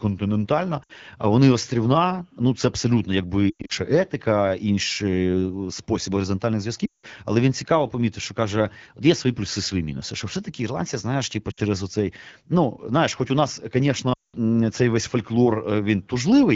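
Lost AMR speech frames occur at 0.83–0.92, 3.49–3.72, 6.86–7.06 (after "спосіб горизонтальних"), 11.51–11.6 and 14.14–14.36 s. The decoder repeats the last pitch and vocal-tract settings at falling gain, so sound smears and fades. The spectrogram shows frozen harmonics dimming toward a gap, and the waveform shows a decaying envelope.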